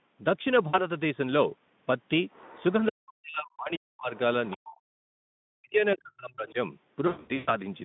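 Around 0.67 to 0.81 s there's VoIP packet loss concealed by the speech codec: about 60 ms went missing, which fits three 20 ms Speex frames, so the decoder stretches the last sound into a short buzzy smear that fades before the speech recovers.

From 2.33 to 2.64 s a faint second voice, about 25 dB down, sneaks in. It's likely the other side's voice leaking through, the far end's loudspeaker audio the echo canceller didn't fully remove. It's back briefly at 4.15 s and louder, only about 15 dB under, from 4.47 to 4.74 s.

The near talker also gets pushed down by as much as about 40 dB from 2.89 to 4.13 s, 4.54 to 5.18 s and 5.56 to 6.57 s, likely speech suppressed in double talk. The canceller ducks everything while both sides talk, so the voice dips and drops out in pieces.

From 7.07 to 7.55 s there's more packet loss concealment, scattered gaps totalling about 320 ms with the longest run near 120 ms, giving a stuttering, buzzy, fading stretch.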